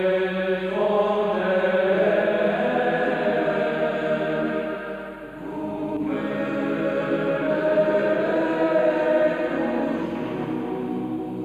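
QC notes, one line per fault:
Throughout: channel delay (comb filtering). One channel arrives roughly a tenth of a millisecond behind the other, which fits an offset of just a few samples, and summing the two to mono cancels their shared content at evenly spaced frequencies. With so short a lag the first notch sits high, around 5 kHz, with further notches spaced regularly above it, so the sound loses top-end air and takes on a hollow, phasey, dulled quality.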